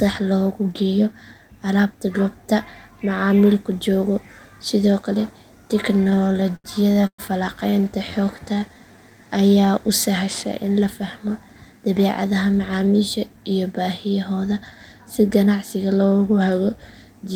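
From 6.07 to 7.20 s there's a burst of repeated stalls, a stutter. Packets kept showing up late, the jitter buffer ran dry 13 times, and the receiver stretched the last sound over each gap, the longest 114 ms. That adds up to 329 ms of filler with nothing lost, so the speech drags and catches. Four more tiny stalls of up to 20 ms follow at 7.70 to 7.87 s.

Right after, from 8.24 to 9.67 s, comes a jitter buffer slow-down. The receiver rebuilt its reserve by repeating pitch periods, adding 186 ms, so the speech runs at 87% speed with the pitch unchanged and sounds drawn out.

Then from 11.58 to 13.51 s there's a jitter buffer speed-up. With too much audio queued, the receiver trimmed out short pitch-period pieces, roughly 150 ms in total, so the speech plays at 108% speed at the same pitch and comes across hurried.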